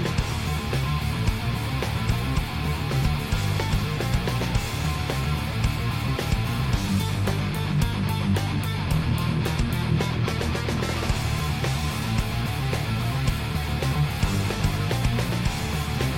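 No technical faults can be heard anywhere in this audio.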